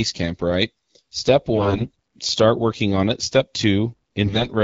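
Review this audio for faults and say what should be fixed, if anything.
AMR bit errors hit the speech from 1.56 to 1.88 s, just before "start working on it", and again from 4.26 to 4.47 s. Flipped low-priority bits misplace excitation pulses, so pitch and level hold but the sound turns hoarse and gargly, unlike packet loss, which mutes or repeats. Stronger radio coverage or more robust channel coding would prevent it.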